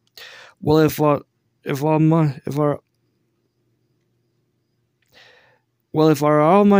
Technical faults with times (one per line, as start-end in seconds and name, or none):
none